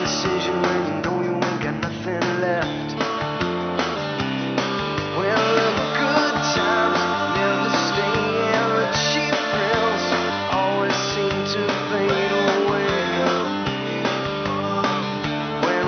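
No technical faults can be heard in this audio.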